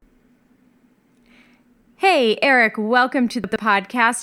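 At 3.44 to 3.56 s the speech briefly jumbles: a case of chunks out of order. One 40 ms block of audio was delivered late and plays two blocks after its proper place, so the 120 ms stretch runs in the wrong sequence with three hard joins. Unlike a dropout or skip, nothing goes missing and no silence appears. All the sound is present, just scrambled, which gives a garbled texture rather than a gap.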